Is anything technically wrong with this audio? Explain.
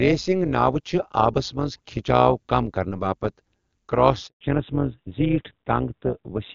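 Yes, there are three faults.

Throughout the clip the speech has a metallic buzz with extra tones around each note, a ripple around 200 Hz with level swings of about 11 dB. This is overlap-add ripple: the audio was split into windowed frames and rejoined with overlaps that don't sum to a steady gain, so the level pulses once per frame.

At 4.27 s the speech fades out within a few tens of milliseconds and stays silent until 4.41 s, a 140 ms hole. This is a handover gap. The call switched networks and no speech frames arrived during the changeover, so whatever was said in that span is gone.

From 4.41 s to the end, the speech turns duller and rougher, with nothing above 4 kHz. This is a fallback to narrowband: the call dropped from the AMR wideband (HD Voice) codec at 23.85 kbit/s, which is faintly if at all audible earlier, to AMR-NB at 12.2 kbit/s, cutting off the upper band.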